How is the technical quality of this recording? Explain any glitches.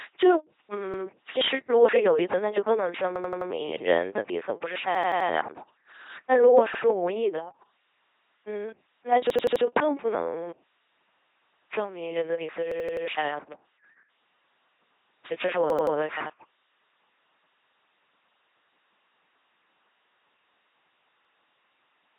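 Technical quality is poor: the whole recording is carried by a very low-rate vocoder, and playback stutters at eight points.

LPC-10 vocoder, throughout: the speech is rebuilt from a few filter poles driven by a buzz or by hiss, so it sounds robotic and mechanical, with heavy damage and nothing above 3.8 kHz. This fits a 2.4 kbit/s vocoder. Unlike ordinary codec smearing, every stretch is either fully buzzy or fully hissy.

Repeated buffer at 0.94, 3.16, 4.95, 6.74, 9.30, 12.72, 15.70 and 21.25 s: when fresh audio arrived late, the device replayed its last 85 ms chunk, which fits a 4096-sample buffer. It does this once at 0.94, 6.74 and 21.25 s, three times at 15.70 s, and four times elsewhere, with a hard join at each repeat. Nothing is skipped, so this is a stutter, not a dropout.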